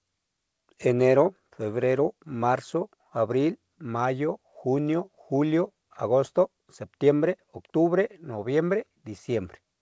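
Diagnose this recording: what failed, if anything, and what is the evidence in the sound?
Nothing failed: the speech passed through a call path whose wideband codec leaves no content above 8 kHz, a band limit that fits G.722, and the sound shows no dropouts, gaps, clicks or level jumps that would point to trouble at any stage.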